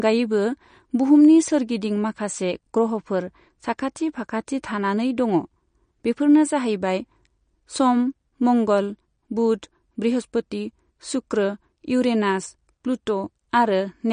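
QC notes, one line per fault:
Throughout: MP3 compression, likely, since nothing gets through above 9.6 kHz and the speech has that plainly audible watery swirl, with s sounds going chirpy and metallic as weak detail flickers frame to frame. That level of damage fits a low bitrate, roughly 40 kbps.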